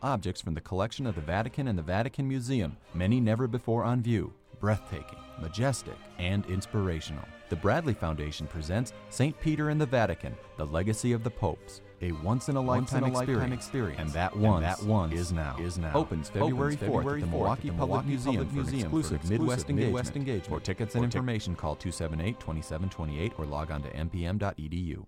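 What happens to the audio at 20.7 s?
At 20.7 s the sound is heard twice: a second full-band copy, about as loud as the original, trails it by roughly half a second with no decay or room colour, so every event returns as a flat, distinct repeat. This doubled audio track runs from 12.66 s to 21.22 s and cuts off abruptly at its end. The likely cause is the same signal being mixed in again through a slower capture path.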